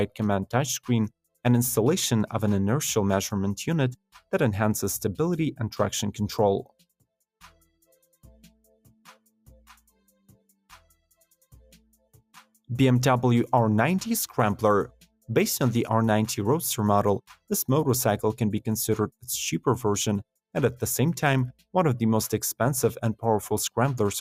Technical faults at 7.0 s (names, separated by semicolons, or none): none